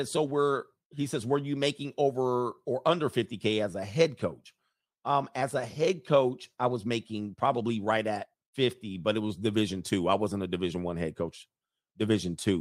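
Speech recording with no audible technical faults anywhere.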